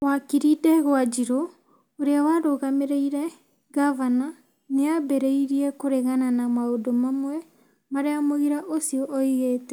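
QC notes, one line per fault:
Nothing stood out on listening to the speech in this clip.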